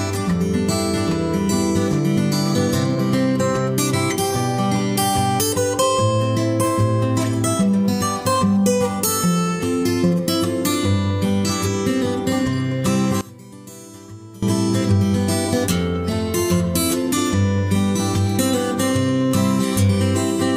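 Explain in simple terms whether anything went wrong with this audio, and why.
Between 13.21 and 14.43 seconds, the sound suddenly drops to a faint trace, then returns. The likely cause is one channel inverted. One side of the stereo signal got flipped upside down. When both sides are combined, the shared parts cancel out.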